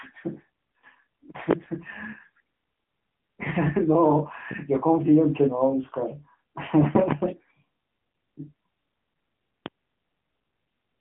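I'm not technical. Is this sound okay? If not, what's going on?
No. The whole clip has the sound of the AMR narrowband mobile codec: speech is squeezed through a mobile phone connection with nothing above 3.7 kHz, so it sounds thin, buzzy and robotic, not just muffled. There are also loud pops at 1.51, 4.51, 6.95 (a quick double pop ending at 7.14) and 9.66 seconds, sharp thumps laid over the speech, which carries on unbroken underneath. That separates them from dropouts, and they are likely caused by an electrical glitch such as a plug or static.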